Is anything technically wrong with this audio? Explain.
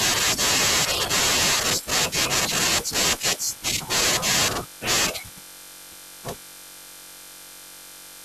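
Yes. From 0.99 to 1.80 s the speech takes on a robotic 100 Hz buzz: buffer tearing, where writer and reader cross mid-buffer, splicing in a small slice of audio from around 20 ms earlier.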